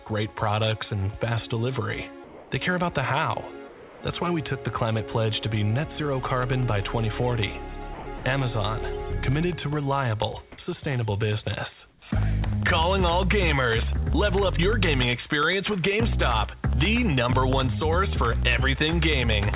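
Comfort noise in place of the background appears at 2.24–2.51 s, 3.68–4.01 s and 11.9–12.02 s. During these pauses the real background, sitting about 21 to 35 dB below the loud passages, is replaced by a smooth, featureless hiss about 2 to 3 dB quieter. This is likely discontinuous transmission: the sender stopped sending in the pause and the receiver filled the gap with synthetic noise until the sound resumed. Periodic USB or driver dropouts begin at 6.13 s and run to the end of the clip. Every 0.1 s a tiny slice of audio is lost and replaced by silence, producing a regular tick or pop about ten times a second, heard only while sound is present. A background task stalling the bus or audio driver on a fixed schedule causes exactly this evenly spaced pattern. Sound dropped by the voice detector occurs at 7.94–8.06 s and again at 8.18–8.24 s. Here real sound, 120 ms and then 60 ms of it, briefly gives way to steady noise before returning. 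The likely cause is the sender's detector misjudging the sound as background, cutting transmission and letting comfort noise stand in until it triggered again. Throughout, nothing above 4 kHz is present, which points to a narrowband call codec such as G.711.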